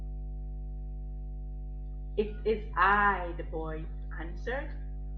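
A ground loop or nearby transformer is feeding the 50 Hz power line into the signal for the whole clip, producing mains hum: a steady low drone with some low harmonics that sits only about 10 dB below the speech and stays constant underneath it.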